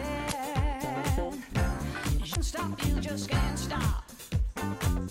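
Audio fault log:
0.28–0.33 s and 2.31–2.37 s, damaged data in a compressed stream: two brief garbled blips of about 55 ms each break the sound. Corrupted bytes in the encoded stream made the decoder misread those frames and lose sync until it locked onto a valid frame header again.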